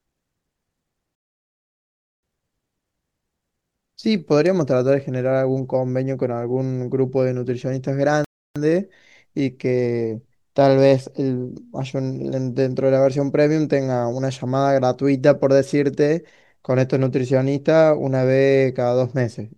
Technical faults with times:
1.15-2.23 rebuffering stall
8.24-8.56 rebuffering stall

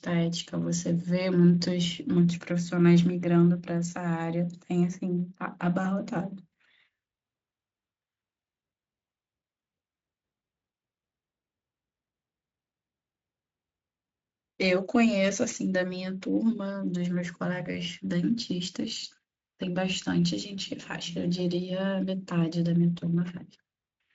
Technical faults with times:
none

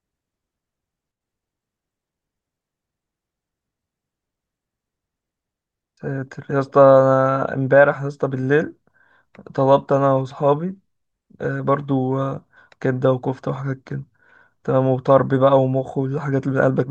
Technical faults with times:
1.11-1.21 sudden gain jump

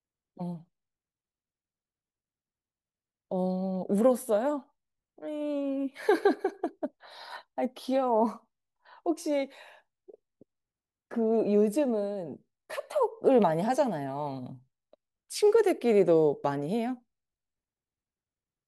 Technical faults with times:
12.93 dropped samples

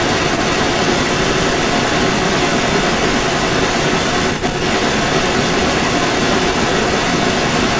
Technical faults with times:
0.00-7.80 echo leak

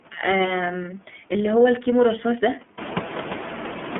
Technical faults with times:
0.00-3.99 iLBC codec

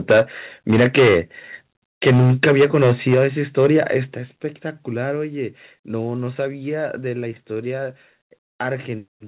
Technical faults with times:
0.10-0.21 microphone overload
0.12 microphone volume stepped down
0.69-1.19 microphone overload
2.02-3.26 microphone overload
3.14 microphone volume stepped down
3.58-3.97 microphone overload
4.14 microphone volume stepped down
5.16 microphone volume stepped down
7.20 microphone volume stepped down

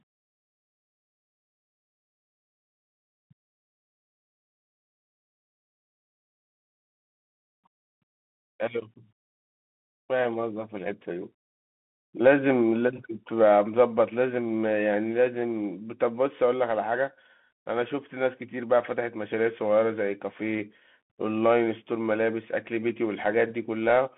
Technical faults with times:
0.00-24.18 Bluetooth CVSD headset codec

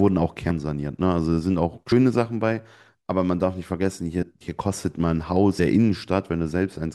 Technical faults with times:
0.49 compressed frames skipped
1.91 compressed frames skipped
4.21 compressed frames skipped
5.58 compressed frames skipped

